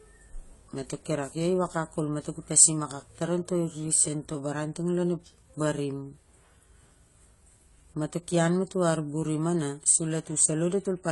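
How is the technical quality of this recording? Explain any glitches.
The recording has plainly audible codec damage running through the whole thing. Throughout, it sounds like AAC compression: nothing above 11.5 kHz, dull, smeared highs and a fizzy, warbly edge on sibilants. That's likely a low-bitrate encode, around 32 kbps by the sound of it, where the encoder drops the top band and coarsely quantises what's left.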